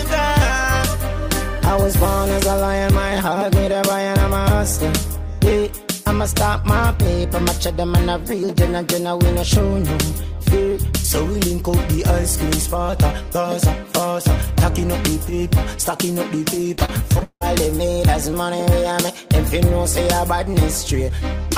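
From 16.75 to 17.43 s the sound turns choppy, with a stuttering quality and pieces missing. This is repeated packet loss: data kept dropping out, each hole patched by stretching the previous sound, the longest about 177 ms, covering roughly 43% of that stretch.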